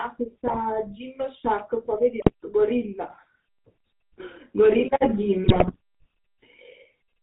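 The whole clip carries GSM full-rate codec damage. Pulse-driven vocal-tract coding with nothing above 4 kHz leaves the speech buzzy and gravelly, fitting a 13 kbps stream. GSM bit errors hit at 0.46 to 0.59 s, 2.2 to 2.31 s and 5.44 to 5.76 s. Corrupted decoder values distort the spectrum and level, causing squawks and gargling.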